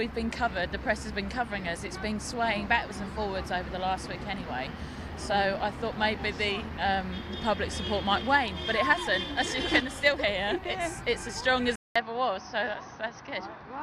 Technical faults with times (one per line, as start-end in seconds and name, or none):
11.76-13.82 input switched to a poorer device